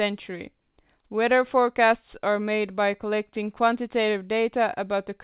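No technical faults can be heard anywhere in the speech. The sound has passed through a call path whose band stops at 4 kHz, which fits a narrowband telephone codec such as G.711 mu-law.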